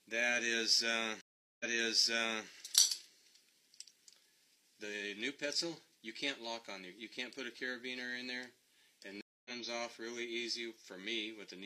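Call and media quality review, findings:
Stream reconnect at 1.21–2.48 s and 9.21–9.51 s: gaps of 385 ms and 239 ms, then audio resumes 0.88 s earlier (repeated section, server burst resend) and about 0.2 s later (lost section). Player connection dropped; decoder restarted mid-stream.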